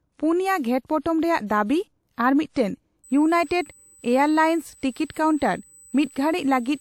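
From the start of the speech, the file has likely been through a low-bitrate encoder before being saved again at a high bitrate. The sound fits a lossy first pass at roughly 64 kbit/s, later stored as MP3 at a higher rate. The later encode keeps whatever damage the first one did, so the larger file sounds no cleaner than the original low-rate version. There is no energy above 20 kHz.

At 3.04 s, just after "ᱫᱟᱵᱤ ᱟᱨ ᱢᱤᱫᱴᱟᱝ", current drawn by the USB bus in 125-microsecond microframes begins leaking into the audio path through power or ground. The result is USB whine: a steady tone fixed at 8 kHz, sitting around 30 dB below the speech. It is a thin, high whistle that does not change pitch, and it runs continuously from that point to the end of the clip.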